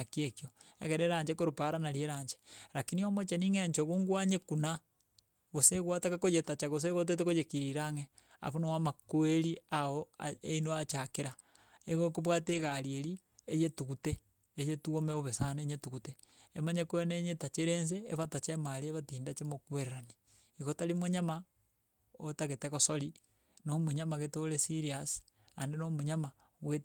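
At 4.75, 12.45 to 12.71, 15.11 and 18.23 s, lost packets were rebuilt from error correction. Low-bitrate copies fill each gap. The speech turns briefly rougher and noisier.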